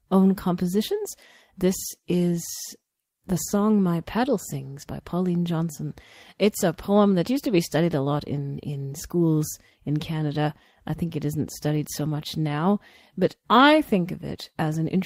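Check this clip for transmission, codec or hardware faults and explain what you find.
Listening through this speech recording, nothing stood out as a problem.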